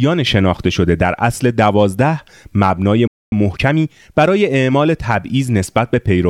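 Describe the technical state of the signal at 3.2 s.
At 3.2 s the speech sits inside a playback stall running from 3.07 to 3.32 s, about 0.25 s of dead silence, likely from the player running out of data or its thread blocking. The waveform drops to a flat line and the spectrogram shows a clean blank column before the speech resumes.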